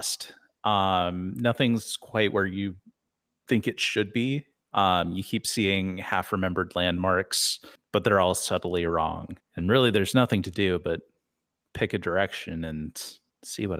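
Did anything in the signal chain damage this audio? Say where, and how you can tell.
No, nothing along the chain from capture to playback has audibly damaged this speech recording, and the signal holds steady and continuous throughout.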